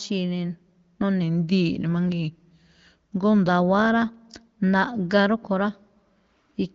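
From 1.22 s to 3.49 s the speech suddenly sags, running about 6.1% slower and dropping 109 cents, a little more than a semitone, before snapping back to normal pitch and pace. This is a drift correction step, likely from clock-matching software that shifted the playback rate in one jump to rebalance its buffer. The audio's bandwidth stops near 7.5 kHz, consistent with AMR wideband (HD Voice) coding.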